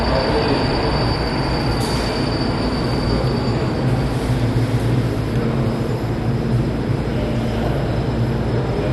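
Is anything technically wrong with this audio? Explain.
Yes. The whole clip carries MP2 compression damage, and it is plainly audible from start to finish. Nothing comes through above about 12.1 kHz, so the sound is dull and closed in. The likely cause is MPEG Layer II coding at a low rate, one that fits roughly 64 kbps. The codec splits the audio into 32 sub-bands and shares out too few bits. Upper bands get switched off, and they flicker in and out. The bands that remain are coarsely quantised, which gives a gurgling, granular edge.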